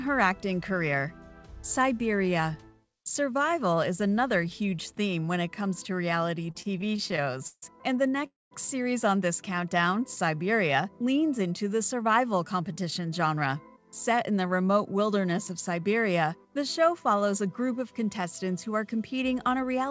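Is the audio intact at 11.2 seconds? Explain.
Yes, the audio is intact at 11.2 seconds, with nothing there beyond the steady band limit near 8 kHz that the G.722 call path imposes throughout.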